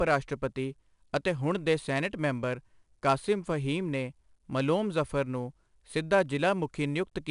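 Throughout, a gritty hiss rides every loud syllable and nothing sounds above 10.6 kHz: 4-bit ADPCM compression, whose coarse adaptive steps leave level-following noise.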